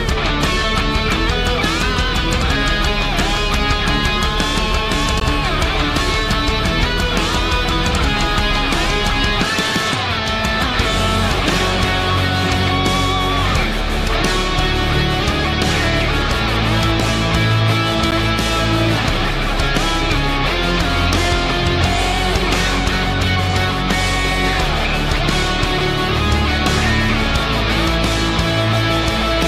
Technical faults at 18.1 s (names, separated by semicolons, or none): block of digital silence